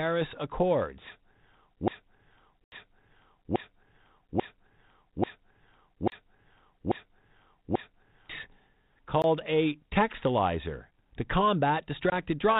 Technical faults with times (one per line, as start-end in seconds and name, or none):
1.88-8.30 broken-record loop
2.64-2.72 block of digital silence
6.10-6.12 block of digital silence
9.22 block of digital silence
12.10-12.13 packet loss on an ADPCM call